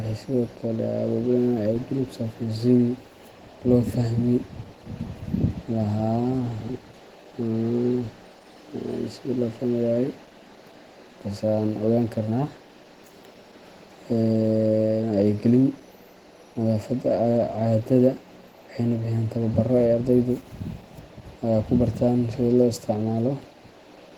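Opus voice compression at a low bitrate runs through the whole speech clip. The coder is working in hybrid mode: linear prediction handles the lower band, and a transform layer covers the range above 8 kHz in 20 ms frames. The band stays fullband, with content reaching about 20.2 kHz, so the damage comes from the bitrate rather than narrowing. The rate sounds like about 16 kbps, and at that level the coarsely coded excitation leaves the speech plainly hoarse and slightly robotic.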